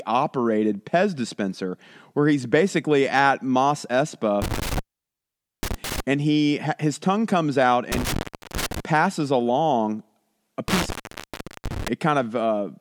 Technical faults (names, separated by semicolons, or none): intermittent contact